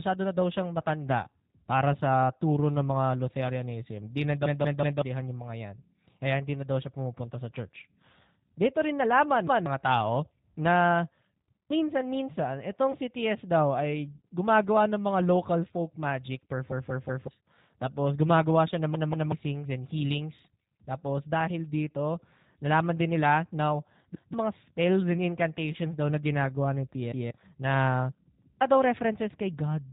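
Throughout the recording the G.729 codec is plainly audible. The speech is rebuilt from a vocal tract filter and pitch predictor at 8 kbit/s, so it sounds rough and slightly synthetic. A spectrogram shows nothing above 4 kHz, and the harmonics look smeared.

From 4.46 to 5.02 s a repeated buffer occurs. The playback device ran dry and replayed the same 0.19 s block three extra times, which fits an 8192-sample buffer. The result is a hard, mechanical stutter with about half a second of speech lost. The waveform shows identical segments butted together, and each seam appears as a vertical line on the spectrogram.

The same repeated buffer fault returns at 11.52 to 11.70 s, with one extra play and roughly 200 ms lost. It is a short double-take with a hard join.

At 12.92 to 12.97 s there is VoIP packet loss concealed by the speech codec. A 20 ms gap, which points to one lost packet, was filled by the decoder extending its last pitch and filter. 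This produces a brief buzzy tone or coloured noise that fades. The spectrogram shows flat, stretched harmonics, and the sound stays weak for tens of milliseconds afterward.

The repeated buffer fault appears again at 18.95 to 19.32 s, where the block plays twice more and about 400 ms vanishes. A final instance at 27.12 to 27.31 s adds one repeat and loses around 200 ms. Both show the same copied waveform blocks and the same sharp edges on the spectrogram.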